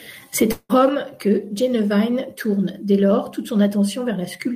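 A speech clip with a long network dropout from 0.51 to 0.71 s: the sound stops being real and is carried on as a smeared, fading continuation for roughly 180 ms before a brief silence of about 30 ms, and the speech resumes with that stretch simply gone. The likely cause is a run of lost packets that the receiver concealed. Unlike a short concealment glitch, the filler lasts nearly two tenths of a second and decays away, and unlike a clean mute, a tail precedes the gap.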